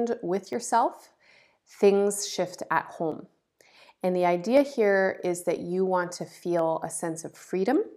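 Dropped samples, heard as single sharp clicks at 0.53 s (just before "yourself things shift at"), 3.12 s (just after that phrase), 4.57 s, 5.56 s (between "here is that" and "you want to") and 6.59 s. Each click is likely a gap of a fraction of a millisecond where the stream skipped ahead. That makes the speech waveform jump to a later value, far too briefly to remove any audible sound.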